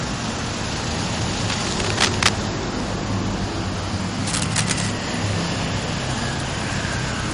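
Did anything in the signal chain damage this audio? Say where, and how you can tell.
Yes. The damage is at the codec stage. Nothing reaches above 10.6 kHz, and the sound turns watery throughout. This is likely MP3 compression, at a bitrate around 40 kbps.

The analogue wiring also shows damage. Rough scratching bursts, roughly as loud as the sound, run from 1.39 to 2.29 s and from 4.27 to 4.91 s. This is likely cable scratch noise from a shifting contact.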